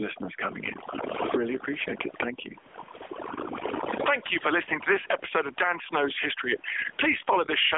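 Speech, run through an AMR narrowband mobile codec for its whole length: nothing gets through above 3.6 kHz, the line band sits at roughly 300 Hz to 3.5 kHz, and the plainly audible buzzy, synthetic edge fits a low AMR-NB mode of around 8 kbps. There's also overdone noise removal throughout, so the background thins into twinkling, warbling specks and quiet bits of the voice get dragged down with it, leaving things a bit watery. On top of that you get gain pumping all the way through, with the level swinging by something like 20 dB and loud and soft parts squashed closer together, likely from the input gain being set too hot and a fast limiter or compressor clamping down on the loud moments. The call microphone processing's low-cut is just taking out the deepest bass, and the room noise sits about 44 dB under the speech.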